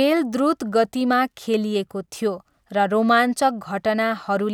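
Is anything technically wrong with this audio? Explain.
No, nothing technically wrong can be heard here.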